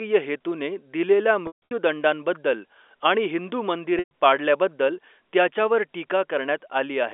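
Around 1.47 to 1.71 s there's packet loss with pitch repetition. About 210 ms of audio goes missing in bits spread over 240 ms, the longest gap around 150 ms. The receiver loops the last pitch period, so you get a brief held buzz that fades to silence within about 50 ms before the speech cross-fades back. The same thing happens from 3.99 to 4.11 s (about 120 ms gone), right before "पाडल्याबद्दल त्याच्यावर", all over a 300 Hz to 3.5 kHz telephone-band line.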